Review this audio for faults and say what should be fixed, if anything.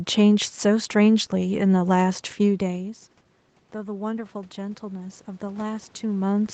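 From 3.72 s to the end there's automatic gain rising. The input level dropped by about 17 dB, and the gain control raised its gain gradually, so the speech and the room noise swell together over a couple of seconds instead of jumping. To prevent it, keep the capture level steady at the source or tune the AGC to respond faster to sudden drops so it doesn't creep up audibly.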